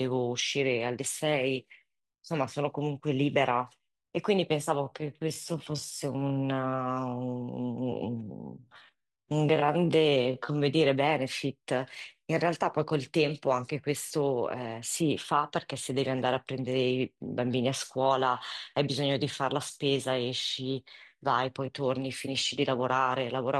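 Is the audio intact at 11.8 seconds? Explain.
Yes, the audio at 11.8 seconds is intact, with no dropout, click or other fault audible at that moment.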